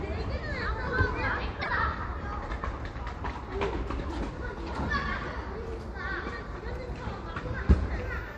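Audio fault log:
1.61–1.69 s, broken MP3 bit reservoir: the sound jumps ahead and a brief disturbance fills roughly three 26 ms frames, likely because frames were dropped and the following frames drew their borrowed reservoir bits from unrelated data.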